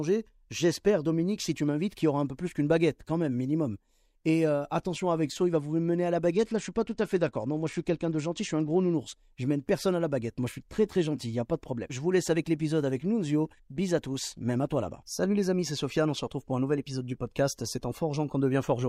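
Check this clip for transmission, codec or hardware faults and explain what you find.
One fault stands out in this speech clip: a Bluetooth SBC bit pool drop from 6.31 to 8.94 s. Across those two and a half seconds the treble goes dull and a gritty, grainy noise rides on the speech until quality snaps back. The sound points to the link lowering the SBC bit pool from around 28 to around 11, near 90 kbps, so the top sub-bands were starved and the rest coarsely quantised.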